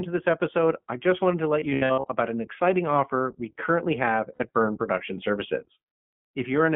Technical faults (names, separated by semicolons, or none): iLBC codec; lost iLBC frames